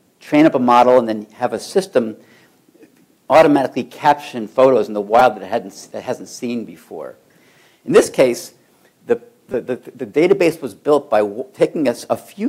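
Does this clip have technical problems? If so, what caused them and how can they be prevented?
Yes. A repeated buffer occurs at 5.19 s and again from 9.52 to 9.54 s. Each time new audio failed to arrive, so the device replayed its last block of roughly 5 ms, three extra times at the first event and four at the second. About 15 ms and 20 ms of audio are lost. Because the block is so short, the repeats fuse into a brief buzz at about 200 Hz rather than an audible stutter. Unlike a dropout, which leaves a silent gap, the sound here is filled with identical copies joined by hard edges. Giving the audio thread higher priority or using a larger buffer would keep data arriving on time.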